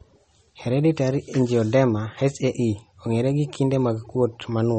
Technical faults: MP3 compression

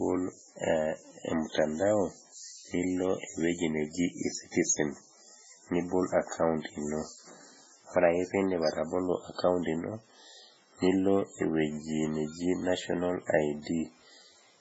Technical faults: MP3 compression

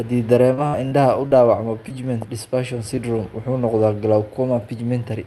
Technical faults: repeated packet loss (robotic sound); short concealed packet loss

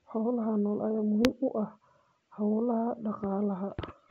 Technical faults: bit errors on an ADPCM link

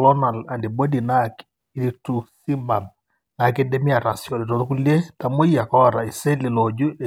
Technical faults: none

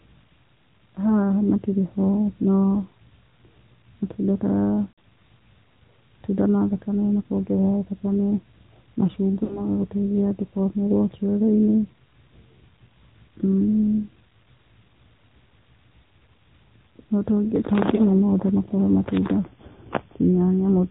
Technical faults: AMR narrowband mobile codec; lost AMR speech frames; drift correction step

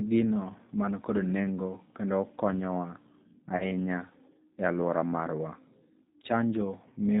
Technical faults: G.729 codec; VoIP packet loss concealed by the speech codec

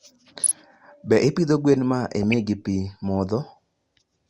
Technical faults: DAB burbling

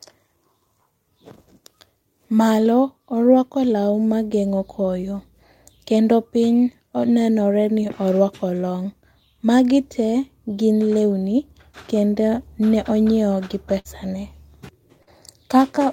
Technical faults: burst of packet loss; short concealed packet loss

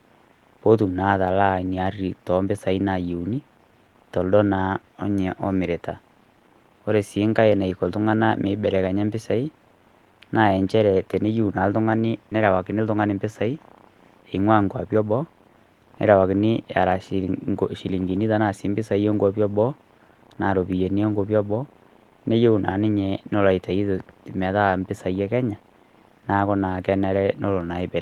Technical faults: skip ahead; jitter buffer speed-up

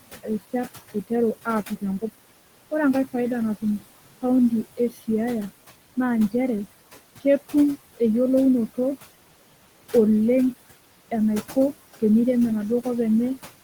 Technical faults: noise suppressor artifacts; speech cut by the noise suppressor

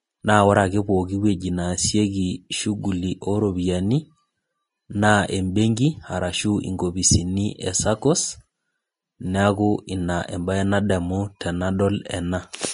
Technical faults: Vorbis compression

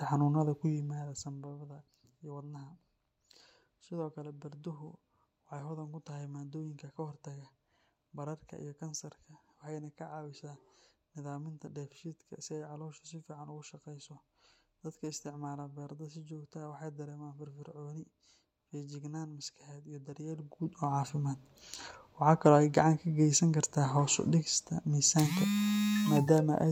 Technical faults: zipper noise

